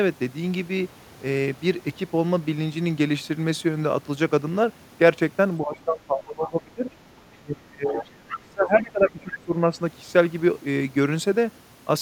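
From 5.6 to 6.91 s, 7.29 to 8.04 s and 8.3 to 9.77 s the speech sinks by roughly 20 to 25 dB. This is speech suppressed in double talk, likely an echo canceller damping the near talker while the far side spoke. Between 7.88 and 8.4 s, and again from 9.09 to 9.4 s, the other side's voice leaks through as a second voice about 10 to 15 dB below the speech, likely echo the canceller failed to remove.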